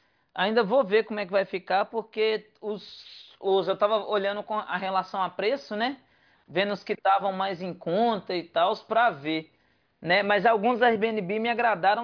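No technical faults are audible.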